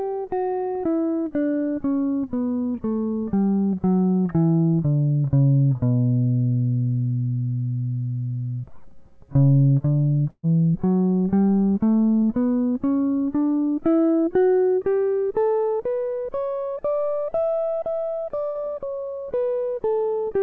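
Three bursts of packet loss hit this music, which comes through a call path with nothing above 8 kHz. At 10.30 s the receiver stretches the last sound for about 131 ms, fading it down until about 40 ms of silence before 10.45 s, and roughly 140 ms of music is skipped. At 12.17 s a shorter 49 ms fill covers a 40 ms hole. At 18.46 s a 90 ms fill hides 100 ms of lost music.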